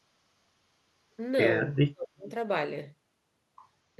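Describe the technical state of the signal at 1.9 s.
Speech suppressed in double talk runs from 1.68 to 2.27 s, so at 1.9 s the speech sits inside a deep dip, falling by roughly 35 dB at its lowest, with about half a second affected in all. The likely cause is an echo canceller meeting speech from both ends at once: unable to tell the near talker apart from loudspeaker echo, it attenuates everything and takes the wanted speech down with the echo.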